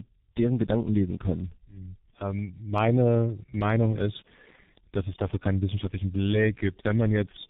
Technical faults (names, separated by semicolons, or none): tandem speech coding